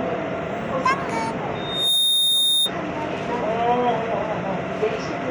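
Loudspeaker feedback squeal from 1.55 to 2.72 s: a 3.7 kHz tone swells over a fraction of a second as the mic-speaker loop runs away, ending up a bit above the sound.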